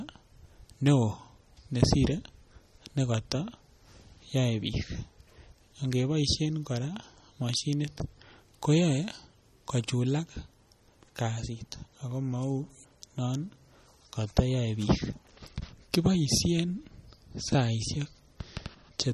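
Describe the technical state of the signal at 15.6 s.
At 15.6 s the speech is still carrying likely MP3 compression, present across the whole clip, with damage that fits a low bitrate around 32 kbps. Weak frequency lines drop in and out between frames, giving a watery, swirly texture, and nothing remains above 13.3 kHz.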